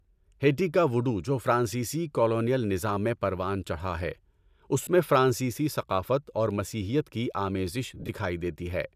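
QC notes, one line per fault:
4.84–4.87 s, lost LE Audio frames: a 30 ms gap just before "میں فرانسیسی", consistent with three 10 ms frames dropping out. The LC3 decoder fills it by repeating the last spectrum with randomised phase, so the speech smears briefly into a noisy blur.
7.95–8.10 s, lost LE Audio frames: after "اور مسیحیت کی آمیزش", about 80 ms is lost in several short bursts across 140 ms, none much over 30 ms. Each burst gets the same randomised-spectrum fill, giving a stuttering, grainy smear rather than clean gaps.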